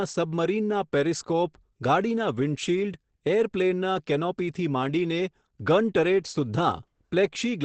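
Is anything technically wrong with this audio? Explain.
Yes, the whole clip carries heavy Opus compression damage. Nothing comes through above about 8.7 kHz, and the speech sounds muffled and hoarse, which is what you get when Opus drops into its SILK speech mode, likely at a low bitrate around 12 kbps.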